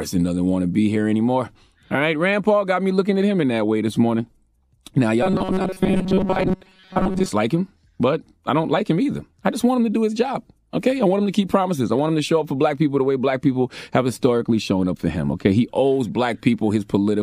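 From 5.23 to 7.28 s the speech turns to robotic sound from repeated short buffers, a rigid metallic 188 Hz buzz. Audio likely arrived too seldom, so a chunk of about 5.3 ms looped while most real audio was skipped. A spectrogram shows fixed harmonic lines 188 Hz apart, and the waveform shows identical repeating cycles.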